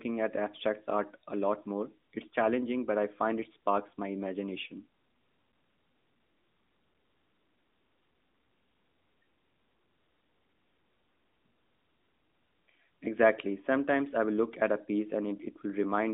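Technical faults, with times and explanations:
No technical faults detected.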